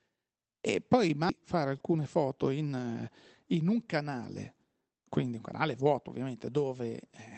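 A skip ahead at 1.3 s breaks this speech clip: about a second of audio is simply gone, and the sound on either side is butted together with no gap or fill, as happens when a jitter buffer discards a backlog to catch up with audio already queued. Jitter buffer speed-up follows from 1.53 to 2.95 s at about 109% speed and again from 3.43 to 6.64 s at about 108%, where the receiver trimmed short pitch-period pieces (roughly 150 ms and 300 ms in total) so the speech sounds hurried at unchanged pitch. All of it passes through a call path with Opus coding noise and a top end cut off at 8 kHz.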